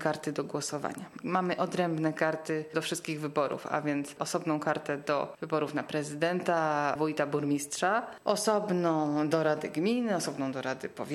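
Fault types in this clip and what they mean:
USB whine: a faint, steady high-pitched tone at 8 kHz, well below the audio, from USB microframe current every 125 microseconds leaking through power or ground.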